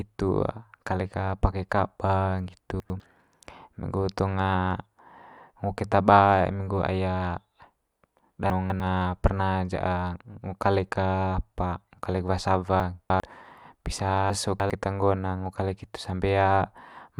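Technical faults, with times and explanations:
2.8–3.0 s, 8.5–8.8 s, 12.8–13.2 s and 14.3–14.7 s, chunks out of order: a 100 ms block of speech arrived late, by one, two, three and three chunks respectively, and plays after what should follow it. Each spot sounds jumbled, with three hard joins.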